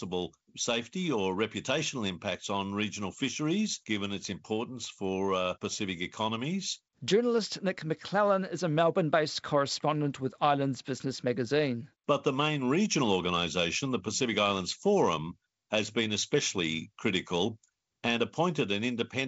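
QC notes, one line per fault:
No faults found in this speech. The G.722 wideband telephone coding at 56 kbit/s is audible as content stopping at about 7.7 kHz, with light coding noise.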